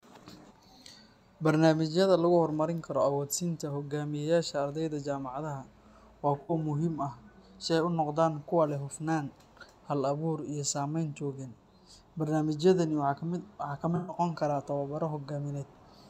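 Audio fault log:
6.40–6.53 s, AAC frame loss with concealment: a brief smeared, noisy patch just before "muhiim ah si", where about 85 ms of audio was lost and filled in from the preceding spectrum.
13.96–14.17 s, AAC frame loss with concealment: a longer smeared, phasey stretch where about 128 ms went missing and the decoder rebuilt it from the last good spectrum.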